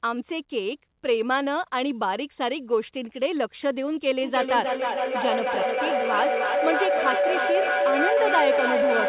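A feedback loop forms in this speech clip when two devices in the same room share the call, and from 4.23 s to the end at 9.08 s each trip from loudspeaker back into microphone adds level. The result is a feedback howl that climbs instead of dying away, narrowing to a tone around 500 Hz with repeats roughly every 0.3 s that peaks at about 2 dB above the speech. The call path itself passes nothing above 4 kHz, which points to a narrowband telephone codec such as G.711.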